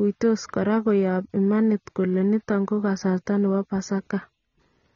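From start to finish the speech sounds dull and smeared, with a fizzy, warbling edge on sibilants and nothing above about 6.9 kHz. The likely cause is heavy AAC compression, consistent with AAC-LC at a low bitrate near 24 kbps, trimming the top band.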